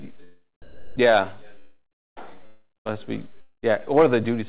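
At 0.62 s the sound gives way to a steady, featureless noise for about 340 ms, then picks back up at 0.96 s. That's a patch of comfort noise, most likely sound dropped by the voice detector. The sender's detector judged that stretch to be background and stopped transmitting, so the receiver filled the gap with generated noise until the detector triggered again and real audio came back.

Then come three gaps that are likely long network dropouts, each a stretch where nothing arrived. The first runs from 1.59 to 2.18 s, the second from 2.46 to 2.94 s, and the third from 3.41 to 3.64 s. In each one, the receiver keeps the last bit of sound going as a fading buzzy smear before it drops to silence. That silence lasts roughly 370 ms in the first gap, 220 ms in the second and 110 ms in the third. When the audio resumes, the missing chunk is simply gone. All of it sits on a narrowband call path with nothing above 4 kHz, which fits G.711.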